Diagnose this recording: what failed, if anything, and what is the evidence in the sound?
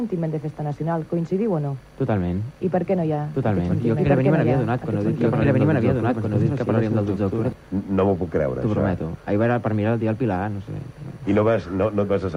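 A second capture path or an edit most likely fed the same audio into the mix twice, producing a doubled audio track. From 3.35 to 7.53 s, a full-band copy about as loud as the original trails it by roughly a second and a half, dry and without decay, starting and stopping abruptly.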